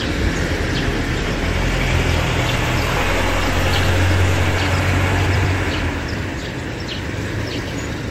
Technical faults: frames out of order

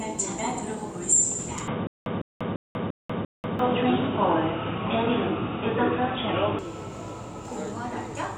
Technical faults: input switched to a poorer device; stutter with silent gaps

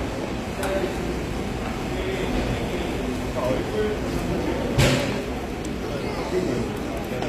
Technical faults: HE-AAC compression

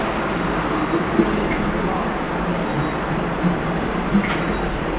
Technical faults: none

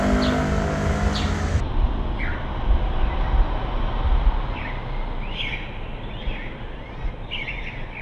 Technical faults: section at the wrong speed

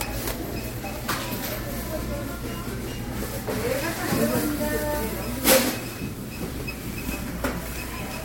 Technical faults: none

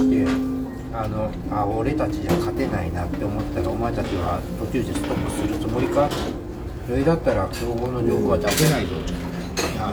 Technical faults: none

